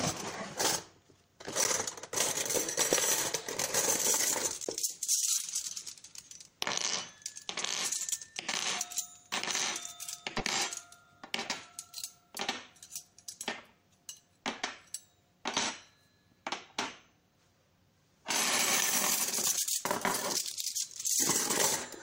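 At 3.10 to 3.15 s, a corrupt frame decoded produces a brief glitch. Damaged bits in a couple of compressed frames put energy at wrong frequencies. At 4.65 s, a 15 ms block of digital silence cuts the sound abruptly. Similar corrupt-frame glitches follow at 5.38 to 5.41 s and 10.38 to 10.42 s.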